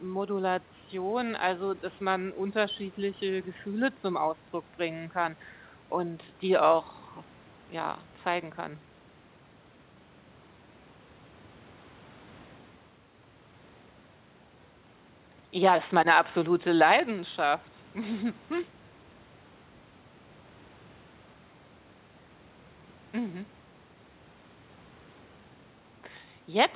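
Nothing stood out on listening to this speech recording, which comes over a call path with nothing above 4 kHz, in keeping with a G.711 mu-law connection.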